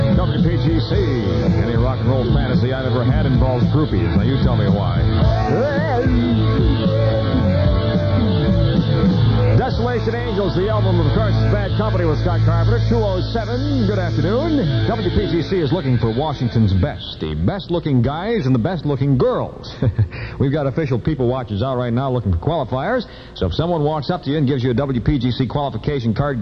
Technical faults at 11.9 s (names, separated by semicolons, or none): none